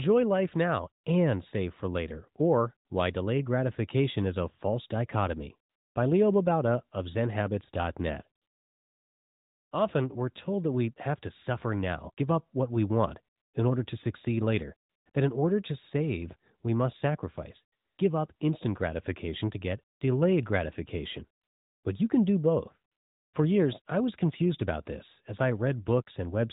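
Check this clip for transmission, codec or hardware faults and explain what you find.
There is one fault: AMR comfort noise, heard through a narrowband phone path with nothing above 4 kHz. It occurs twelve times between 1.04 s and 23.34 s, lasting from 20 ms to 1.3 s. The longest runs from 8.42 s to 9.72 s. The sender judged these moments silent and stopped sending speech. The receiver filled each gap with steady, smooth synthetic noise, which switches in and out.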